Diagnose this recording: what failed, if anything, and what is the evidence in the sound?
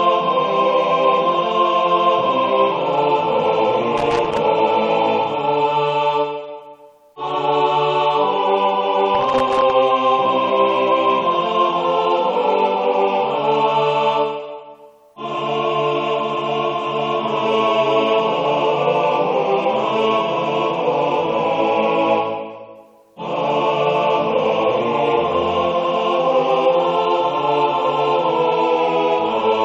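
Analogue wiring: loose connector crackle from 3.98 to 4.37 s and 9.15 to 9.71 s. An intermittent contact chops the signal irregularly, unlike evenly spaced digital clicks.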